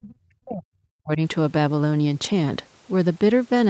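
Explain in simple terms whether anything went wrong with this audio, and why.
In the first 1.2 seconds, the call's echo canceller likely heard both sides talking at once and mistook this talker for loudspeaker echo. This is speech suppressed in double talk: for about a second, the voice drops sharply, nearly to silence, before recovering.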